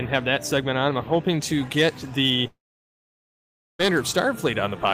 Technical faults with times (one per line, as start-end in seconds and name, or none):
2.47-3.81 long network dropout